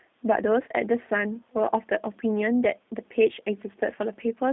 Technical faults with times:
0.00-4.52 G.729 codec

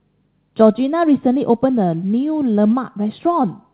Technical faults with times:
none

